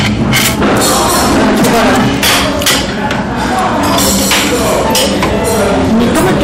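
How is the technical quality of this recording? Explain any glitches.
Poor, because hard clipping runs through the whole recording. From start to finish the signal is driven about 27 dB past what the chain can pass. Nearly a third of the samples hit the ceiling and are cut flat. Those squared-off peaks add harmonics high up the spectrum. With overload this heavy, the result is not occasional crackle on peaks. Every loud sound carries a harsh, buzzing fuzz, and the dynamics are crushed.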